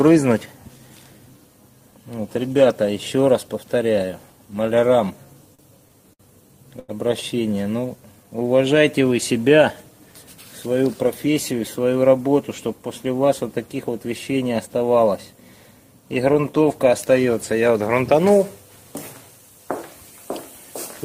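Three short stalls from late packets come first, at 5.55 s, 6.13 s and 6.79 s, growing from 38 ms to 61 ms to 90 ms. Each time the jitter buffer ran dry, so the receiver held the last sound until the packet arrived and then resumed where it left off. Nothing drops out. What tells these apart from a gap or a slow-down is a single sustained smear, with a slight buzz or dip, at one point, and each one adds its full length to the delay.

From 7.80 s to 8.63 s a jitter buffer slow-down follows, running at about 92% speed and adding 78 ms in total. Rather than one long hold, the receiver repeated tiny pitch-period slices many times across the stretch to rebuild its reserve. The sound drags evenly at unchanged pitch. That spread-out, gradual stretching is what separates it from the concentrated stalls just before.

Jitter buffer speed-ups run at 10.66 to 12.18 s at about 107% and at 17.66 to 18.15 s at about 106%. 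In each, the receiver trimmed short pitch-period pieces repeatedly to shed excess delay: roughly a tenth of a second in the first and a few tens of milliseconds in the second. Pitch stays put while pacing turns hurried.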